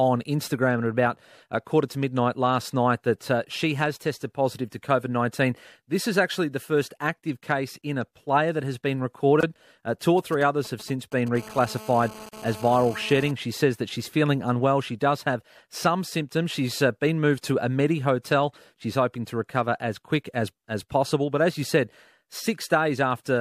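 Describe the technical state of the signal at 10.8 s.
GSM signalling bursts run through 10.8 s, spanning 10.18 to 11.36 s. A nearby 2G phone is transmitting short groups of radio bursts while signalling to its network, and the audio circuitry rectifies that RF into the signal path. The result is a galloping dit-dit-dit of short buzzes at a 216.7 Hz repetition rate, sitting roughly 20 dB below the speech.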